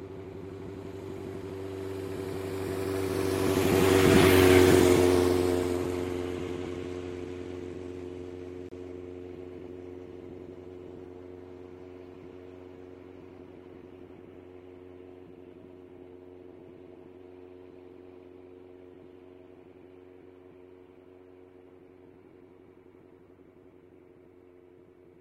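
Two stream segments were stitched together with their time stamps slightly apart, and the player filled the difference with silence. The result is a gap between stream segments: a hard-edged hole of about 29 ms from 8.69 to 8.72 s, where the audio cuts out abruptly and resumes just as sharply. Nothing is lost, but everything after it arrives 29 ms late. The stream was cut into 6 s segments.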